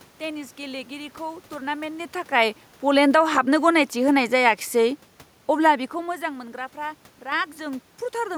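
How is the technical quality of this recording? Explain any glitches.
One glitch stands out: the automatic gain falling between 3.96 and 6.23 s. The gain control judged the input too loud, or its background noise too strong, and pulled its gain down by about 3 dB, so the speech and the room noise sink together. On a waveform the envelope tapers across that span, and a spectrogram shows the background floor dimming along with the voice. The level shifts around 2 s and 5.5 s come from the talker moving relative to the microphone.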